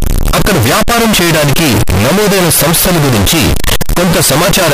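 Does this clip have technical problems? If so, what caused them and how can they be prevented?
Yes. The whole clip shows a float read as integer fault, likely from 32-bit float samples being read as 32-bit integers. The sign and exponent bits then decide each value, so the waveform becomes nearly square at an almost fixed, high level however quiet the original was. The speech is very loud and harsh, with background noise as loud as the speech, though the pitch can still be followed. To prevent it, make sure the reading stage declares the same 32-bit float format that the writing stage used.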